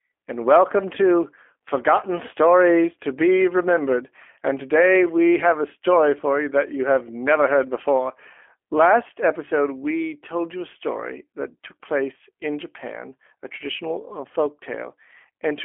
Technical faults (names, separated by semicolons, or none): G.729 codec